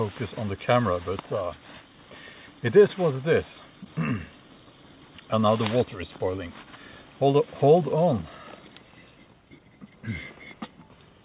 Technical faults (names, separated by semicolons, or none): none